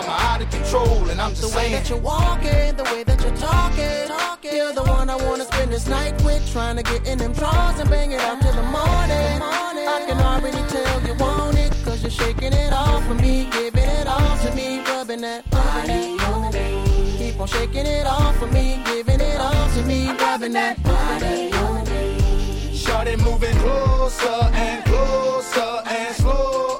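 Nothing is technically wrong with this audio; no faults can be heard at any point.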